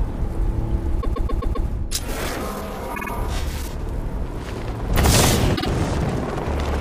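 Stutters at 1.01 to 1.66 s, where a 130.6 ms block plays five extra times, at 2.94 to 3.10 s (a 52.2 ms block, three extra times) and at 5.55 to 5.66 s (52.2 ms, twice) are repeated frames: compressed frames sent or written more than once, adding about 0.91 s.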